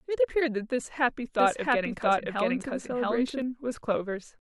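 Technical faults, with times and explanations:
1.40 to 3.42 s, doubled audio track: the speech is heard twice at once, with a second full-band copy trailing roughly 0.7 s behind at about the same loudness as the original, so syllables pile on top of earlier ones. The copy carries no reverberant tail or room colouring and cuts in and out abruptly at both ends. This likely comes from the same signal being captured again through a slower path, or from an edit leaving two offset copies.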